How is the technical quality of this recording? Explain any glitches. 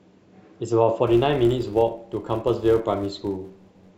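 The recording has one clear technical fault covering most of its second half. From 1.07 s to 3.92 s the speech carries a filter restarted on every block. The filter loses its memory at each block boundary and starts again from silence, leaving a small transient at every restart. The result is a 188 Hz buzz, which fits a 256-sample block, riding under the speech and growing louder and quieter with its level. A waveform shows evenly spaced spikes; a spectrogram shows thin vertical lines with harmonic bands at 188 Hz.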